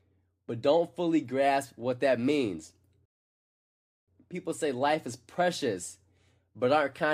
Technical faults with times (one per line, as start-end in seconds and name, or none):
3.05-4.08 rebuffering stall